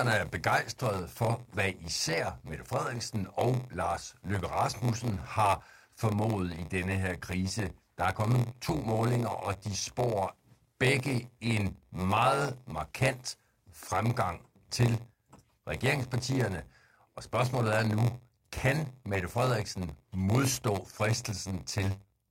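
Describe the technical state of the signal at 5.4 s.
At 5.4 s the sound carries a steady buzz at about 93.8 Hz and plays back slightly slow, at 0.938 of normal speed with its pitch roughly unchanged. This block size mismatch (padded) runs through the whole clip, not just this moment. One stage hands over blocks shorter than the next stage reads, which fits a 512-sample read block. The leftover part of each block is filled with zeros, so a brief silent gap repeats at the block rate and produces the buzz. Those added gaps stretch the timing by the ratio of the two block sizes.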